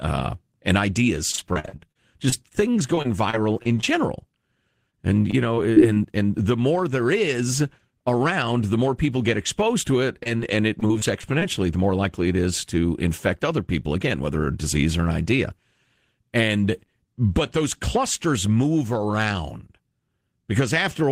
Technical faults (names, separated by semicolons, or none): repeated packet loss (robotic sound); jitter buffer slow-down; short concealed packet loss